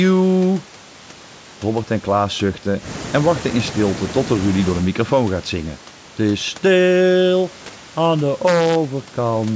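The speech signal carries no technical faults: the room noise about 22 dB below it belongs to the recording itself, and the absence of anything above 8 kHz, along with the trimmed lowest bass, reflects ordinary call microphone processing.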